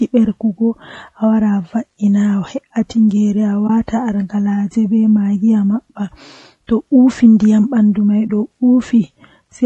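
Throughout the speech, voices sound rough and grainy, with noise filling the gaps between harmonics and a thin, synthetic-sounding top band. This is likely low-delay AAC compression (AAC-ELD), whose short frames blur pitch detail, which fits about 32 kbps. Unlike broadband hiss, the grain follows the voice.

At 3.67 s and again at 8.27 s comes AAC frame loss with muting. One frame, roughly 20 ms, was zeroed, and overlapping windows fade the sound out and back in. Each gap is a brief dip, which sets it apart from a hard dropout or digital glitch.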